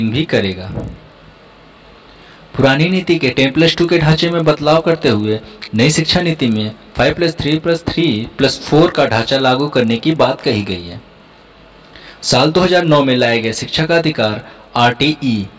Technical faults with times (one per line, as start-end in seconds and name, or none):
0.00-15.59 resampler restarted on every block